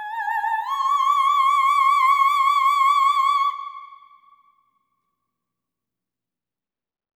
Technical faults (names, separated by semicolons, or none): none